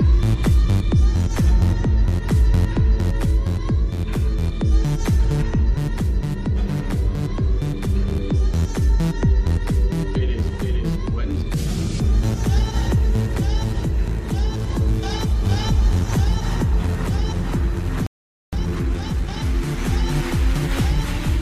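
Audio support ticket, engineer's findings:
Playback stall, 18.07 s to 18.53 s. Output drops to silence for about 460 ms mid-flow, then resumes. Probable component: player buffer or output thread. Likely cause: buffer underrun or a blocked audio thread starving the device.

Time-compressed catch-up, 18.53 s to 19.45 s. Audio runs hurried, about 1.5x speed, pitch unchanged. Probable component: player's latency-recovery stage. Mechanism: small segments cut and cross-faded to drain the backlog built during the stall.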